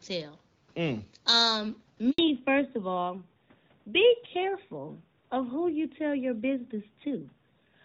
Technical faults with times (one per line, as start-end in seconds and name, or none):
2.10-2.18 handover gap
2.18-7.84 fallback to narrowband